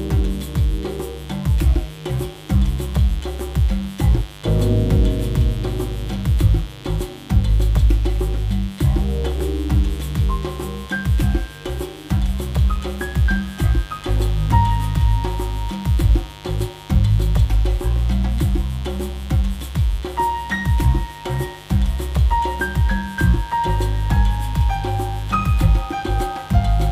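From the first second to the end, a mains buzz sits under the sound, fairly loud at roughly 20 dB below it. Sharp switching spikes, from something like a dimmer, a rectifier or an unshielded line, enter twice per 50 Hz cycle and spread harmonics up into the kilohertz range, giving a raspy, steady rasp. Plain hum would be a smooth, low 50 Hz tone with little energy above a few hundred hertz.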